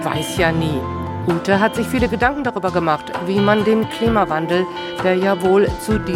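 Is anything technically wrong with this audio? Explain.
No, nothing technically wrong.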